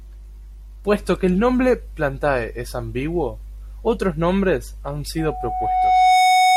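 Loudspeaker feedback squeal takes over this speech clip from 5.18 s, just after "ambiguo otros nombres han", to the end: a 741 Hz tone swells over roughly a second to about 10 dB above the speech, as the microphone re-amplifies its own loudspeaker.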